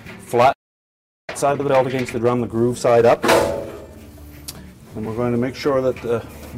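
The audio goes silent from 0.53 to 1.29 s, about 0.76 s, then resumes. This playback stall was likely caused by a buffer running dry. From 1.29 to 4.29 s there is time-compressed catch-up. The sound is hurried to about 1.25 times normal speed at unchanged pitch. Frames out of order appear twice, at 1.54 to 1.69 s and at 4.97 to 5.07 s. Each short stretch plays with its two halves swapped, giving a garbled flutter.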